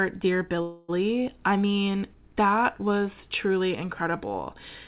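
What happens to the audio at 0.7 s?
From 0.62 to 0.90 s there is a call audio freeze, likely from delayed packets draining the jitter buffer. The last sound stretches into a fading buzz, a flat smeared band on a spectrogram, then "I mean that was" resumes 264 ms late, nothing lost.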